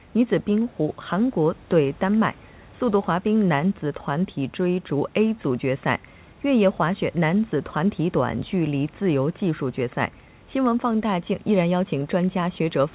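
No technical faults are audible.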